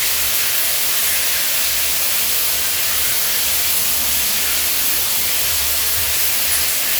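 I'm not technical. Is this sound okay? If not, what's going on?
Yes, this sound is okay; there's nothing wrong with it that needs explaining.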